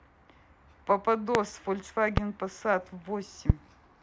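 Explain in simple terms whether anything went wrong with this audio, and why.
Three loud pops cut through this speech, at 1.35–1.37 s, 2.17–2.20 s and 3.50–3.52 s. Each is a single sharp thump, much louder than the talking, lasting only a few hundredths of a second. The likely cause is a sudden electrical jolt from a plug, switch or static discharge. Unlike a dropout, the speech is not interrupted: it carries on underneath each pop, with the burst simply added on top.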